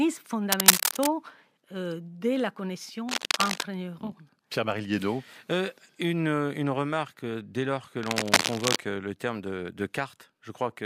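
A worn cable, connector or control being disturbed likely causes this speech clip's cable scratch noise, as contact resistance jumps erratically and injects ragged noise bursts. Scratching rustle covers the audio from 0.52 to 1.07 s, well above the speech; after "de la" from 3.09 to 3.63 s, roughly at speech level; and from 8.03 to 8.76 s, between "remarque dès lors que" and "le terme de de", somewhat above it.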